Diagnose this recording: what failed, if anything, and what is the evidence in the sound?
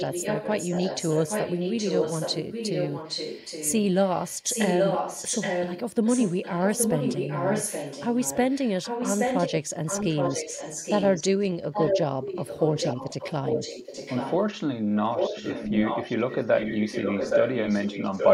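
Echo leak in the call processing: a copy of the speech trails 818 ms behind at 0–3.84, 4.07–9.52, 9.85–11.23, 11.40–11.47 (faint), 11.72–12.02, 12.23–14.37 and 14.95 s to the end, mostly near full level. Likely a far-end speakerphone whose echo canceller let its playback back through.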